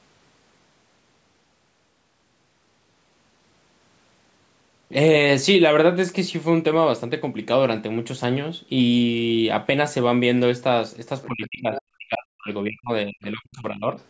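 Speech recorded through a call microphone path, with the band ending at 8 kHz. The other side's voice leaking through appears as brief faint scraps at 11.23–11.27 s and 11.75–11.80 s, roughly 15 to 20 dB below the talker, likely residual loudspeaker echo the canceller missed. Speech is suppressed in double talk from 11.27 to 12.91 s and 13.07 to 13.98 s, where the talker's level drops by up to about 40 dB, likely because the canceller attenuated both voices during overlap.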